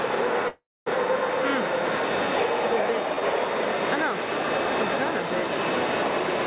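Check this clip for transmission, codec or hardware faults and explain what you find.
There is one fault, a call audio freeze, heard through a narrowband call path that carries nothing above 4 kHz. It runs from 0.48 to 0.88 s. The sound stops moving forward and the last moment is held as a fading buzz or hiss, then about 250 ms of silence. When it resumes, it picks up exactly where it left off. The likely cause is packets held up in transit, so the jitter buffer ran dry and the receiver filled the wait. Nothing is lost, but everything after arrives about 0.38 s later.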